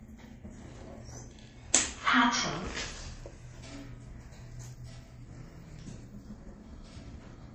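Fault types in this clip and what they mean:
Transcoding between lossy codecs: smeared, swirly highs and warbling over a dulled top appear together throughout, likely from a 48 kbit/s MP3 re-encoded as 48 kbit/s HE-AAC. On a spectrogram, there is a hard upper cut-off with patchy, copied-looking bands above it.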